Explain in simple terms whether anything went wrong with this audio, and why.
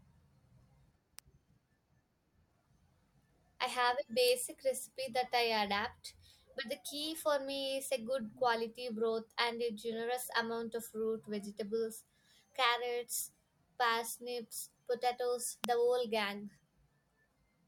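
Something nearby was most likely switching on or off, such as a light switch, a motor, or a small static discharge. That creates a tiny burst of electricity the audio cable picks up, known as an electrical switching spike. It shows up as a sharp snap laid over the speech at 1.19 s, 4.28 s and 15.64 s. The first is the quietest, the second a little stronger, and the one at 15.64 s is clearly the loudest.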